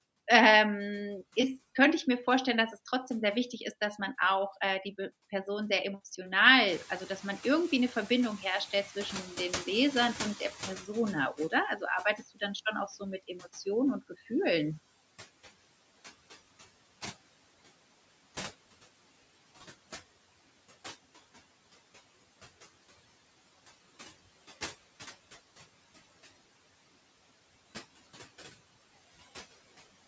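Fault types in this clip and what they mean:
noise suppressor artifacts: Throughout this speech, the suppressor pulls down bands it judges to be steady noise by about 17 dB. The background sinks in pauses and swells under speech. A spectrogram shows the noise floor pumping frame by frame.
noise suppressor catching up: The room noise rises sharply by about 20 dB at roughly 6.5 s, and the suppressor's estimate trails it. From 6.67 to 11.28 s the louder noise passes through with less reduction, then settles about 16 dB lower as the estimate adapts over 4.61 s. A spectrogram shows a bright broadband floor fading gradually.
speech cut by the noise suppressor: Between 12.04 and 12.42 s, just before "schon auch so mit", the suppressor mistakes part of the speech for background and turns it down by up to about 15 dB over roughly a tenth of a second. That stretch sounds swallowed. The waveform shows a brief dip in the speech envelope, and a spectrogram shows weakened speech energy there.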